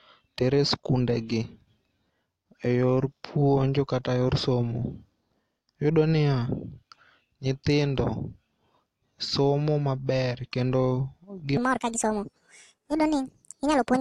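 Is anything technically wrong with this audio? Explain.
Yes. From 11.57 s to the end of the clip at 14.01 s, a section at the wrong speed plays back 1.73 times faster than it was recorded, and the pitch rises with it by roughly ten semitones. The speech turns hurried and squeaky all at once. The likely cause is that this stretch was resampled or clocked at the wrong rate during editing or playback. On a spectrogram the harmonics jump sharply upward at 11.57 s. In the waveform, the syllables there look compressed in time.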